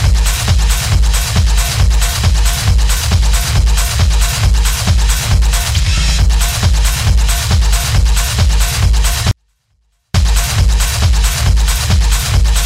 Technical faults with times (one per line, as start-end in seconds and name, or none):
9.31-10.14 24-bit alignment error (too quiet)